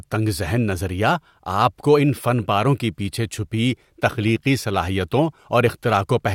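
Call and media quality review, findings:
No audible faults in the speech signal at any point, so no component or mechanism needs attention.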